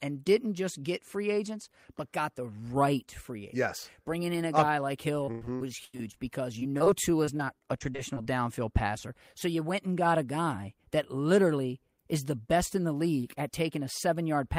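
Just after "a guy uh like", from 5.25 to 6.16 s, repeated packet loss (robotic sound) chops the audio with closely spaced concealed holes, the longest near 0.1 s. Over a third of the stretch is patched, so the sound turns choppy. At 6.78–6.82 s and 6.84–6.88 s, two short concealed packet losses, each about 20 ms, leave isolated brief smears rather than a sustained robotic texture. From 7.25 to 8.27 s, ending before "passer so you went", a milder run of repeated loss returns, with gaps under 30 ms covering about 15% of the span.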